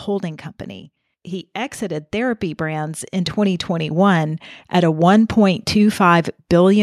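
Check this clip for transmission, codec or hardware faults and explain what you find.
One fault is present: automatic gain rising. It runs from 1.78 s to 4.50 s in this speech clip. It ends just before "at a". Across that span, the level climbs steadily by about 10 dB. The automatic gain control judged the input too quiet. It then raised its gain step by step rather than at once. Because the gain acts on everything, the voice and the background noise swell together. The result is a slow, even rise in loudness lasting nearly three seconds.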